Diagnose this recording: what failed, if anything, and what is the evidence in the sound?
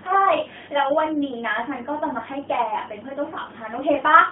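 The codec stage is at fault throughout. The speech is confined to a telephone band of roughly 150 Hz to 3.4 kHz, with nothing above 4 kHz. The voice has a plainly audible buzzy, synthetic quality, which is the signature of the AMR narrowband mobile codec. That codec rebuilds speech from a vocal tract model excited by a handful of pulses per 5 ms subframe. The degree of coarseness points to a mid-range mode around 10.2 kbps.

The radio link, network stage, fails at 3.46 to 3.50 s, where there is a brief dip or warble consistent with a single lost AMR speech frame of 20 ms. When a frame fails its checksum, the decoder fills the gap by repeating the previous pitch and vocal tract parameters at reduced gain. That produces a short smeared, attenuated patch instead of a hard dropout, and the speech sounds momentarily weak or rough as it recovers.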